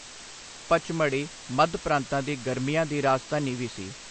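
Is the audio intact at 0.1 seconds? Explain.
No. At 0.1 s the speech carries low bit depth with dither throughout: rounding to about 6 bits leaves a steady, even hiss roughly 15 dB below the speech, seen as a grey noise floor across the spectrogram.

The speech also sounds watery and swirly, with a hard cutoff at 8.3 kHz that shows as an empty band above it. That points to a very low bitrate, likely MP3 compression at around 30 kbps.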